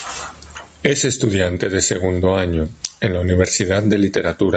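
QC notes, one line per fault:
Throughout, gain pumping: loud and soft parts are squashed closer in level, swinging about 20 dB, likely a fast limiter reacting to excessive microphone gain.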